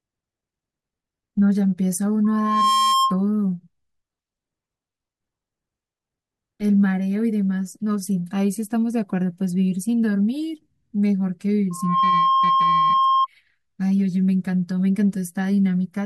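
Loudspeaker feedback squeal hits this speech clip at 2.24–3.21 s and 11.70–13.27 s: a 1.1 kHz loop tone swells within about half a second, then rings a few dB above the voice.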